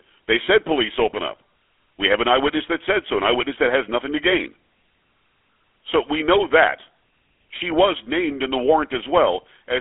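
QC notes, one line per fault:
Throughout: GSM full-rate codec. The voice is plainly buzzy and gravelly. The codec rebuilds it from a sparse pulse train driving a vocal-tract model, which fits a 13 kbps GSM link. The line spans 300 Hz to 3.5 kHz, with nothing above 3.8 kHz.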